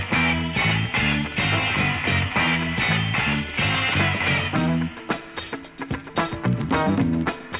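Nothing is technically wrong with the clip.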